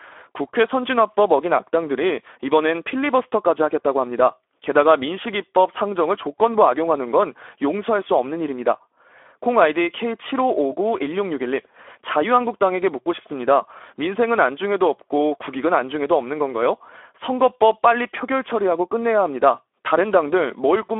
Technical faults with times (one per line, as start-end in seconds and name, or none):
0.00-21.00 Speex codec